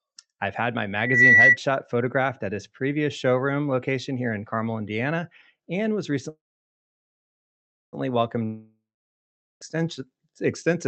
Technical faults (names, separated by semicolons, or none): loudspeaker feedback squeal; call audio freeze; long network dropout; jitter buffer slow-down